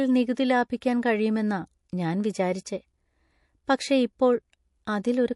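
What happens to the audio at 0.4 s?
Just before 0.4 s, from 0.35 to 0.37 s, the encoder failed to switch to short blocks for a sharp onset, so quantisation noise sized for the loud attack spread back across a transform window of about 48 ms into the quiet gap ahead of it. That is pre-echo: a hiss, about 18 dB above the surrounding floor and lasting 21 ms, rises just before "ലാഭിക്കാൻ കഴിയുമെന്നാ ഞാൻ വിചാരിച്ചെ", and the attack itself lands soft and smeared rather than crisp.

Around this moment, as across the whole clip, the sound carries plainly audible MP3 compression damage, likely from encoding at a low bitrate near 48 kbps. Starved of bits, the encoder chops the treble at a fixed cut-off and drops weak frequency lines that flicker on and off between frames. The speech therefore sounds dull and watery, with a swirling, metallic edge on s sounds and blurred consonant onsets.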